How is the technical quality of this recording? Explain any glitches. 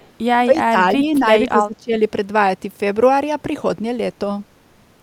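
The recording has two problems in its first two seconds: a brief trace of echo at the very start, then three stretches where the speech is pulled down in level.

From 0.00 to 0.08 s there is an echo leak: a very faint copy of speech, roughly 35 dB below the voice, trailing the original by 220 ms. The likely cause is a speakerphone on the far end whose echo canceller let a little of its loudspeaker pickup through, which was sent back down the line. A fixed delay of about a fifth of a second is what separates this from room reverberation, which would smear continuously instead of repeating as a distinct delayed copy.

Three passages show speech suppressed in double talk: 0.45 to 0.76 s, with about 0.2 s affected and a drop of around 15 dB; 0.96 to 1.24 s, a milder dip of around 5 dB over about 0.15 s; and 1.48 to 1.95 s, the deepest, around 20 dB over roughly 0.4 s. Here an echo canceller likely mistook the talker for echo while both ends spoke and turned everything down. 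The voice dips in level during these spans.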